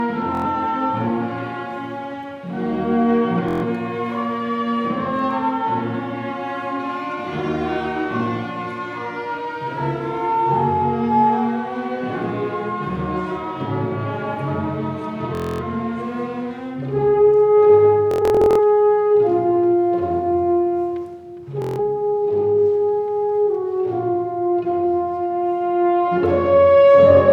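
Bluetooth stutter hits at 0.35, 3.49, 15.35, 18.11 and 21.62 s, each time a short slice of sound repeating as a buzzing, machine-gun judder while the receiver waits for late or lost packets. The gaps grow from about 93 ms to 255 ms. At 18.11 s, 348 ms of dropouts scatter across nearly half a second. The sound then jumps ahead as if it had played on.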